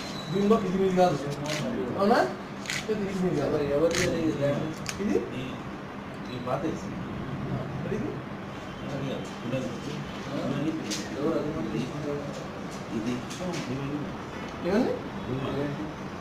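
Crude rate conversion runs throughout. The sound points to 48 kHz resampled to 44.1 kHz by dropping samples, leaving a gritty, inharmonic fizz roughly 30 dB down.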